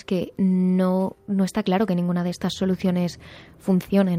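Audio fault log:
Nothing stood out on listening to this speech recording.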